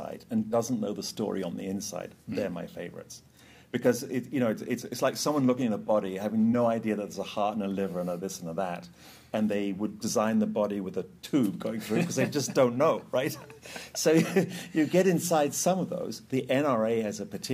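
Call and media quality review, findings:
No faults found on review; nothing to report.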